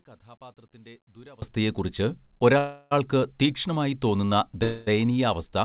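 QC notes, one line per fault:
0.00–1.42 s, one channel inverted: in the mono sum the speech drops by about 26 dB and becomes a faint remnant. This is likely because one stereo channel has reversed polarity, so the content common to both sides cancels and only their small difference remains. On the waveform, the opening 1.4 s is a collapsed, low-amplitude envelope next to the normal level afterwards. On a spectrogram, that stretch is pale.
2.58–2.93 s and 4.63–4.89 s, call audio freeze: the sound holds on as a decaying continuation for about 330 ms, ending in a 10 ms silence, just before "തീക്ഷ്ണമായി തോന്നുന്ന". It then holds for about 236 ms, with no silence, just after "തീക്ഷ്ണമായി തോന്നുന്ന". Nothing is lost, and speech resumes where it stopped, each time later by the held duration. The likely cause is delayed packets emptying the jitter buffer. On a spectrogram, each freeze shows smeared, repeated harmonic bands fading out, all below the 4 kHz ceiling of the G.711 call path.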